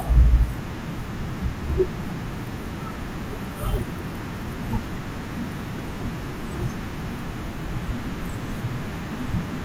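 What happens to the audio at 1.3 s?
Nothing goes wrong at 1.3 s; the speech carries on intact through that moment with no audible fault.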